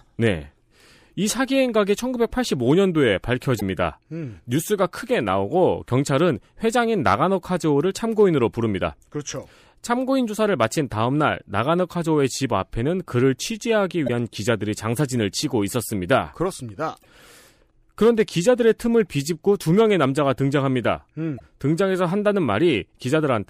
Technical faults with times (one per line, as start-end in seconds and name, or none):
3.57-3.62 damaged data in a compressed stream
14.04-14.09 damaged data in a compressed stream
16.99-17.05 damaged data in a compressed stream
21.36-21.41 damaged data in a compressed stream